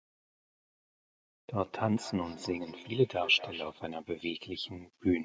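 From 1.76 to 3.8 s, feedback echo between two devices repeats the speech every fifth of a second, about 15 dB down, as ringing copies, not reverb.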